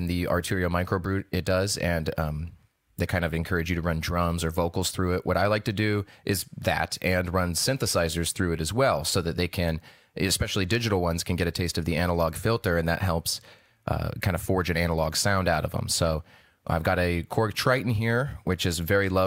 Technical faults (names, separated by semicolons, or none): none